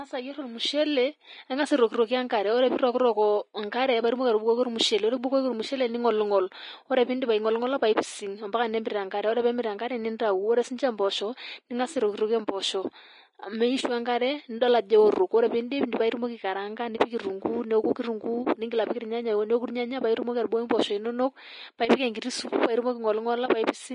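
Speech runs the whole length with plainly audible Vorbis compression damage, likely from low-quality Vorbis encoding. Nothing remains above 10.6 kHz, so the treble is cut off, and the upper band that survives is coarsely quantised into a hissy, grainy texture. Sibilants and breathy detail turn to noise of roughly matching energy, consonant attacks lose their edge, and tonal parts take on a roughened quality. The degree of damage fits a bitrate around 32 kbps. At 10.19 s there is a pre-echo: a short hiss of about 11 ms arrives just ahead of a sharp attack, which sounds soft and smeared. It comes from the same transform coding. The quantisation noise sized for the loud onset is spread across the whole block, including the quiet stretch before the attack lands, so the noise leaks out ahead of it.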